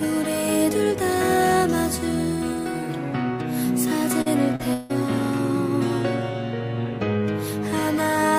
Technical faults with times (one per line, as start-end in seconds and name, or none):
4.21-4.28 short concealed packet loss
4.56-4.61 short concealed packet loss
4.73-4.91 long network dropout